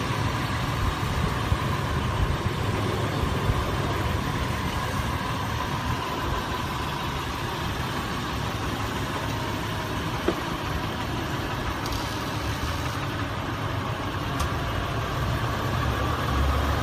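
Brief skips fall at 1.67, 5.65, 7.64, 9.63, 13.60 and 15.59 s. Each drops about 10 ms, with the edges butted together. The spacing follows a 2 s grid. This points to audio missing between chunks, likely lost as one chunk closes and the next opens.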